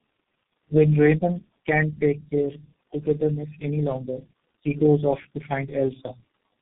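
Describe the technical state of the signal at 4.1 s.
At 4.1 s, like the whole clip, the speech carries tandem speech coding. Three low-rate codecs in series, ending in G.723.1 around 6.3 kbit/s, each re-coding the last one's damage, leave it rough, warbly and muffled, with nothing above 3.5 kHz.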